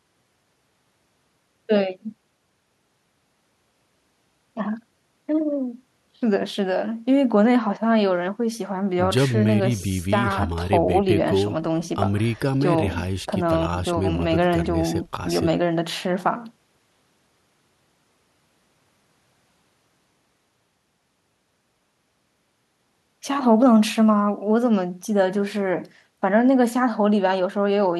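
Speech recording with no audible technical faults anywhere in the signal.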